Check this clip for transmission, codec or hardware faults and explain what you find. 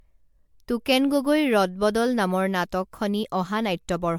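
The clip has one fault, present from start to finish.

Generation loss runs through the whole speech clip. The likely cause is the audio being decoded and re-encoded as MP3 several times, about five passes at roughly 100 kbit/s. Each pass requantises on a shifted frame grid, so the errors stack. The result is swirly, hollow-sounding speech with smeared consonant onsets, more degraded than a single encode at that rate would be, and nothing above 19.8 kHz.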